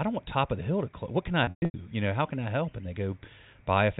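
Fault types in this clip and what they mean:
Packet loss with pitch repetition: around 1.44 to 1.74 s, lost audio is bridged by a repeated pitch period, heard as a buzzy, fading hold rather than abrupt silence.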